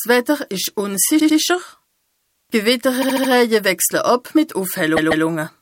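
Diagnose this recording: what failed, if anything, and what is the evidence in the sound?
At 0.63 to 0.66 s an electrical switching spike sits on top of the sound: a sharp snap, or a tight cluster of clicks, about 24 ms long, unrelated to the surrounding audio. This points to the analogue wiring stage. The likely cause is a nearby switch, motor or static discharge arcing briefly and coupling into the audio line, so the burst is added to the signal rather than replacing any of it.

Repeated frames produce three stutters, a storage or transmission fault at the codec level. From 1.19 to 1.38 s a 96 ms block plays twice more, adding 192 ms. From 3.01 to 3.30 s a 72 ms block repeats four extra times, adding 288 ms. From 4.96 to 5.25 s a 144 ms block plays twice more, adding 288 ms. The block lengths fit short runs of compressed frames written or sent more than once.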